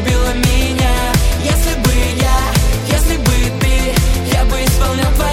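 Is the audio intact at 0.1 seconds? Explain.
Yes, at 0.1 seconds the audio is intact, with no dropout, click, distortion or other fault audible at that moment.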